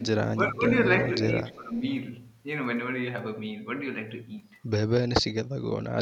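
From 0 to 0.63 s and 1.43 to 1.85 s, the speech dips by roughly 15 dB. From 5.54 to 5.71 s and 5.89 to 5.97 s, it drops deeper, near 30 dB. This is speech suppressed in double talk, likely an echo canceller turning down the talker along with the loudspeaker echo.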